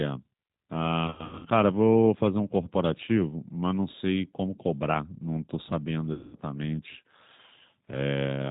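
A speech recording carrying the G.729 codec throughout, with damage that is plainly audible and consistent with an 8 kbit/s G.729A stream. The voice sounds rough and faintly synthetic because it is rebuilt from a vocal tract filter, a pitch predictor and a few sparse pulses per frame. On a spectrogram, energy stops sharply at 4 kHz, and the harmonics look smeared and grainy rather than cleanly striated. Two bursts of VoIP packet loss concealed by the speech codec interrupt it. From 1.07 to 1.46 s, about 240 ms of audio is missing, scattered across a 360 ms stretch with the longest gap 80 ms. From 6.13 to 6.36 s, about 200 ms is lost. In each case the decoder repeats its last pitch and filter at falling gain, so the sound turns into a buzzy tone or coloured noise that fades. The waveform shows the envelope decaying where the signal should continue, and the spectrogram shows flat, unchanging bands in place of moving formants.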